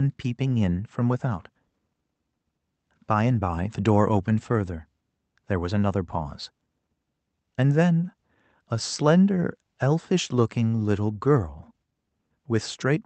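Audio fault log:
No faults detected.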